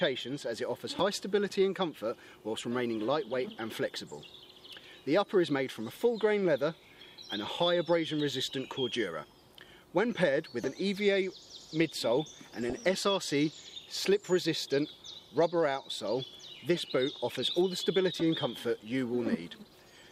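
Around 12.62 to 12.79 s there's a short burst of DAB burbling, lasting about 0.16 s. Reception dipped enough that bit errors, at a small fraction of a percent, got past the error correction and into the MP2 audio data. Corrupted samples put short blips of noise into single sub-bands, and it sounds like about ten frames were hit. You hear it as a brief patch of burbling over the programme.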